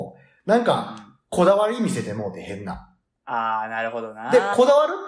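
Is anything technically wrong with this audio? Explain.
No, nothing is technically wrong with this audio.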